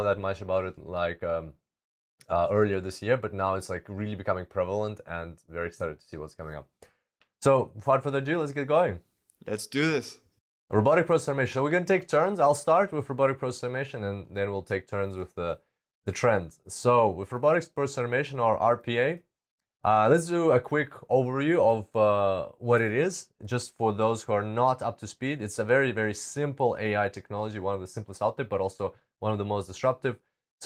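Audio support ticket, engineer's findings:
No faults found in this speech audio.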